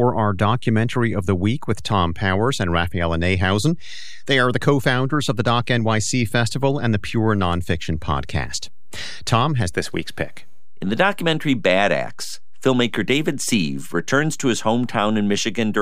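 The recording is speech. A DC offset runs through it from start to finish. The whole waveform sits shifted away from zero by a constant amount, at about -28 dBFS. This shift cannot be heard as a sound of its own. It shows up instead as steady energy at the very bottom of the spectrum, at zero frequency. It also uses up headroom, because the signal swings around a displaced centre rather than around zero.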